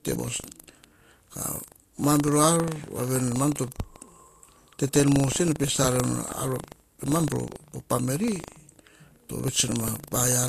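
From start to finish the speech carries a steady robotic rattle at 25 Hz, the signature of buffer tearing. The playback writer and the hardware reader have drifted so that they cross inside every 40 ms period, and a small slice of each buffer, a few percent, holds audio from roughly 150 ms earlier. The rattle is present only while there is speech. On a waveform each period shows a short foreign segment with hard joins on both sides. A spectrogram shows evenly spaced vertical clicks 40 ms apart.

Across the whole clip the spectrum also stops dead at 14.2 kHz, and the speech carries the artefacts of low-bitrate coding. The file is a 320 kbit/s MP3, but that much bandwidth would normally reach well past this ceiling. The likely cause is low-bitrate audio saved at a high bitrate: the sound fits an earlier encode of around 40 kbit/s that was later re-encoded to MP3. On a spectrogram the content sits under a flat horizontal edge with empty space above it, and mottled, blocky patches appear where the first codec removed detail.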